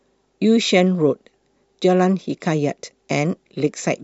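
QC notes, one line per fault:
No fault to note.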